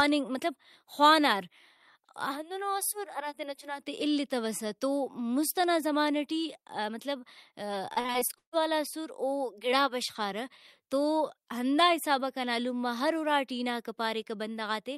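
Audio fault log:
7.93–8.54 s, repeated packet loss (robotic sound): the sound breaks up into a rapid chain of dropouts, which points to around eight separate holes, the longest about 140 ms. Roughly half of this stretch is patched by stretching the preceding sound, giving a choppy texture. On a spectrogram, harmonics freeze into flat smeared bands alternating with clean stretches; the waveform shows repeated, uniform-looking segments between sudden edges.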